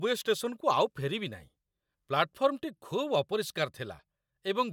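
Nothing stood out on listening to this speech recording.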